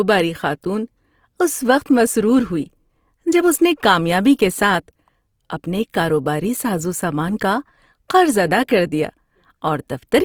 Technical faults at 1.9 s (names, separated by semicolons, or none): Opus compression